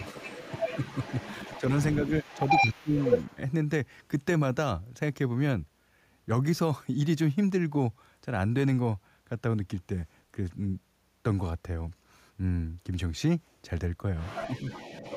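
From 0.0 to 1.62 s a faint second voice sits well beneath the talker. This is the other side's voice leaking through, likely loudspeaker echo the canceller failed to remove. From 1.79 to 3.35 s that voice returns slightly louder than the talker. Inside that stretch, from 2.61 to 2.94 s the talker drops sharply for a fraction of a second, and from 3.31 to 3.4 s it dips more shallowly. This is speech suppressed in double talk, likely the canceller turning everything down while both sides spoke. From 14.19 s to the end the leaking voice comes back, somewhat quieter than the talker, likely the same uncancelled echo.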